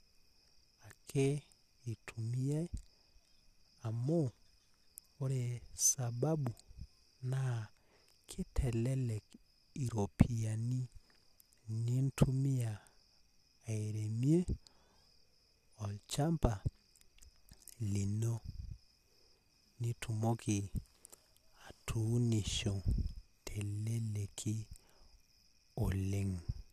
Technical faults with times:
none

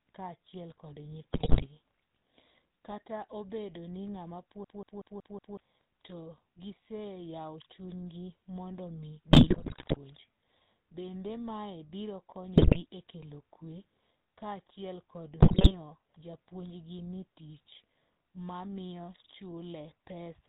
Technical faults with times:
0.00-20.48 GSM full-rate codec
1.32-1.67 GSM bit errors
4.64-5.57 system hang loop
9.30-9.98 GSM bit errors
12.56-12.86 GSM bit errors
15.40-15.75 GSM bit errors

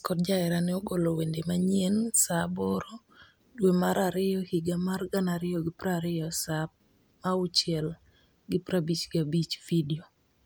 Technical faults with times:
none

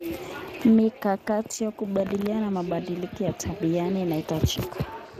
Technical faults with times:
0.00-5.20 Speex codec

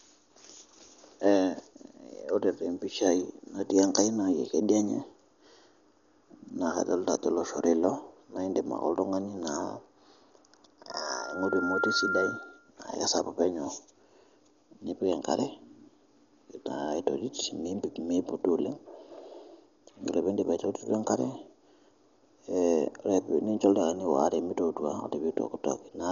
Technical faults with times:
0.00-26.11 Dolby Digital compression
10.91-12.70 loudspeaker feedback squeal

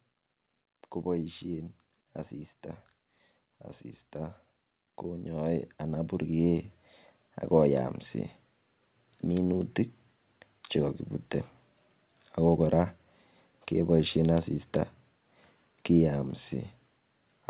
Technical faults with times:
1.04-2.92 automatic gain rising
4.13-7.88 automatic gain rising

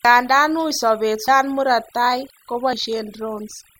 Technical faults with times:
0.00-3.80 overdone noise removal
1.28 dropped buffer (overrun)
2.73 dropped buffer (overrun)

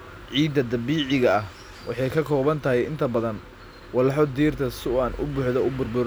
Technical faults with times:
none

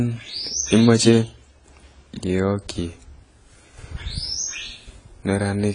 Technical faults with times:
0.00-5.75 AAC compression

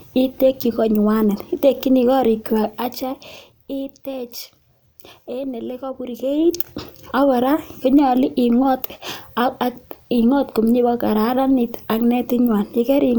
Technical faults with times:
6.13-6.57 zipper noise

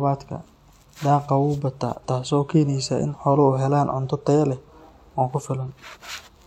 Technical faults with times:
none

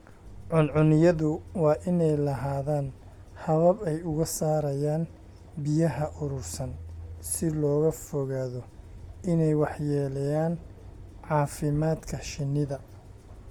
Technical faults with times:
0.00-13.50 Bluetooth LC3 compression

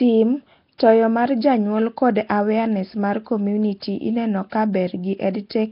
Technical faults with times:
0.00-5.72 Nellymoser compression
0.78 pre-echo
3.80-3.82 pre-echo
4.50-4.52 pre-echo

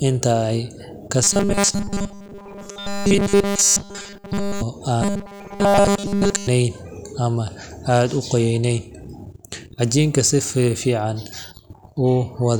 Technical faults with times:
1.23-4.62 robotic sound from repeated short buffers
5.02-6.47 robotic sound from repeated short buffers

